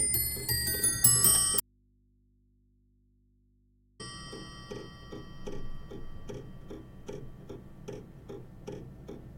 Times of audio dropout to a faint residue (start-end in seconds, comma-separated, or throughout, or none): 1.60-4.00